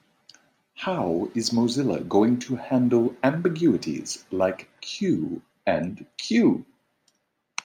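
From 0.98 s to 4.65 s the speech picks up sample clock jitter: the converter's timing wobbles by something like a couple of microseconds, so fast-moving parts of the waveform land off target. You hear a faint hiss, roughly 40 dB down, thickening on loud, bright sounds and disappearing in pauses.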